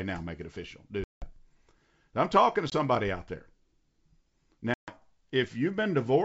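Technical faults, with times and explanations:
1.04–1.32 s, 2.70–2.73 s, 4.74–4.93 s: packet loss on an ADPCM call, with gaps of 180, 20 and 140 ms. Each appears as a hard-edged blank in the waveform and spectrogram. The speech resumes slightly distorted while the decoder's predictor resynchronises.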